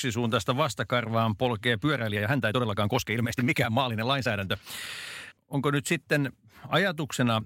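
Software likely squeezed part of the recording to fit a shorter length, holding pitch steady by dropping short slices. From 1.79 to 4.89 s, right after "vastakarvaan polkee", this time-stretched section plays at 1.49 times normal speed, so the speech abruptly turns rushed while its pitch stays unchanged.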